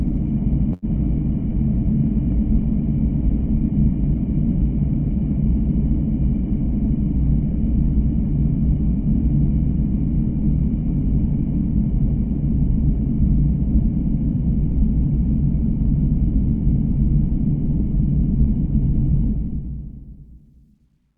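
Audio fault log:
0.73–0.85 s, short stall from a late packet: A packet arrived late and the jitter buffer ran dry, so the receiver held the last sound for about 90 ms, then carried on from the same point with nothing lost. The sound lingers briefly with a faint buzz or dip. On a spectrogram, the frequency content at that moment smears into a short flat band. The waveform shows the same pitch cycle repeated, and everything after it sits 90 ms later.
6.84–9.29 s, jitter buffer speed-up: The buffer held more audio than it aims for. To drain it, the receiver clipped out short pitch-period slices again and again, roughly 50 ms in total. Playback runs at about 102% speed with the pitch unchanged. Spectrogram harmonics stay at the same heights while events crowd a little closer in time. The waveform shows tiny seams where whole cycles were removed.
19.25–21.17 s, truncation distortion on a fade: During the smooth fade-out that starts around 19 s, the level drops toward the smallest step of an undithered gain stage, which fits 12-bit resolution. 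The quiet tail turns gritty, and it is at its worst from about 20.50 s. The spectrogram shows a grainy broadband haze that rises relative to the fading content. Zoomed in, the waveform turns into square staircase steps.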